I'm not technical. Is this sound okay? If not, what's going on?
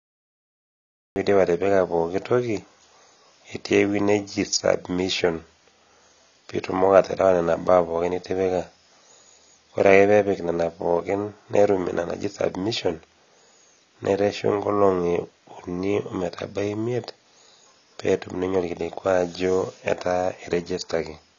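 No. Two things are wrong with it.

The first is a cut-off start. For the first 1.16 seconds there is dead digital silence. Then the speech bursts in abruptly, already in the middle of a sound. There is no natural beginning and no gentle fade-in. The recording or stream simply started late, so the opening of what was being said is missing.

The second problem runs through the whole clip. The speech sounds dull and smeared. Nothing is present above about 7 kHz, so the crisp top end is gone. S sounds and other hissy sounds come out fizzy or warbling instead of clean. This is plainly audible damage, likely from AAC compression squeezed too hard. That kind of compression throws away sound detail to save space, and here it threw away too much.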